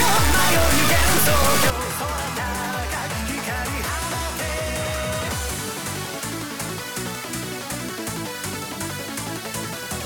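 From 0.0 to 1.70 s the sound turns distorted, with noise filling the quiet moments. This is likely a stuck bit, one data bit held fixed.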